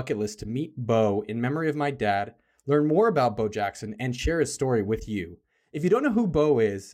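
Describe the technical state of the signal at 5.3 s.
At 5.3 s the speech signal is intact, with no audible dropout, distortion, clipping or other technical fault at that moment.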